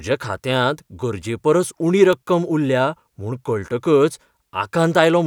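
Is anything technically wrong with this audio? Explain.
Yes. At 2.13 s, right after "खात्यांत गरजेपरस उणी", a sharp snap or tight cluster of clicks sits on top of the speech, peaking around -10 dBFS. It is an electrical switching spike, likely from a nearby switch, motor or static discharge arcing briefly and coupling into the audio line. Unlike a digital dropout or buffer glitch, the speech underneath carries on unbroken; the snap is added energy, not a gap or discontinuity in the signal.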